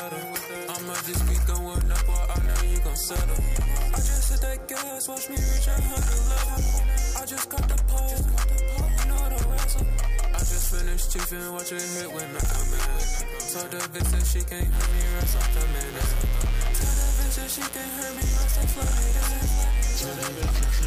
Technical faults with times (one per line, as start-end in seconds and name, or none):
14.70-20.87 mains buzz